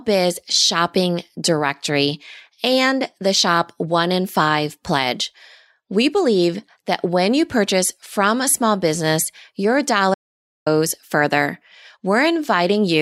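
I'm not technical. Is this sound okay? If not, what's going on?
No. Just after "a small business your", at 10.14 s, the speech cuts out completely for about half a second, until 10.66 s, with dead silence and no room sound. This is an audio dropout to silence, likely from the input briefly disconnecting or muting while recording continued.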